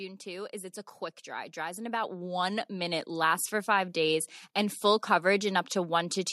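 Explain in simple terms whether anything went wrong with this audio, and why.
Automatic gain rising, from 0.23 to 4.0 s: the recording's level control judged the speech too quiet and kept turning it up, so voice and background swell together.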